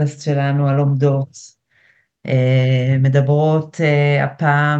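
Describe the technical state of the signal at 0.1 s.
Nothing is wrong with the signal at 0.1 s; the audio is intact at that point.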